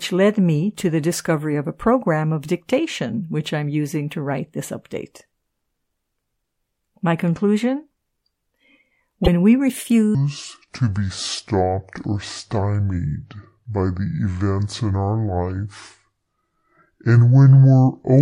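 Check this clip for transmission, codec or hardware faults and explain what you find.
Two faults are audible in this speech clip: a short burst of damaged data in the compressed stream, followed by a long section playing at the wrong speed.

From 9.24 to 9.28 s there is damaged data in the compressed stream. Corrupted bytes make the decoder misread the frames there, lose sync and hunt for the next valid frame header. The result is a brief chirp or squawk. On a spectrogram it shows as a thin vertical smear of broadband energy unrelated to the surrounding speech. The waveform has a small jagged discontinuity.

From 10.15 s to the end, the section plays at the wrong speed, about 0.62 times normal, which drops pitch by roughly seven semitones. Speed and pitch fall together, so the speech turns deep, slow and drawn out. The likely cause is playback or editing against a mismatched clock. On a spectrogram the harmonics and formants shift downward and syllables stretch horizontally. 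The waveform's envelope spreads out, with longer gaps between bursts.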